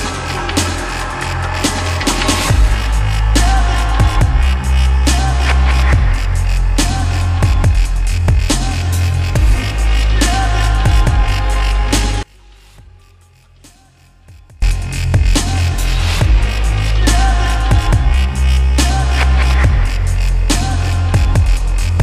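One channel inverted, 12.23 to 14.62 s: the sound abruptly shrinks to a faint residue about 28 dB down, its centre almost gone. The likely cause is one stereo channel with reversed polarity, so shared content cancels in mono.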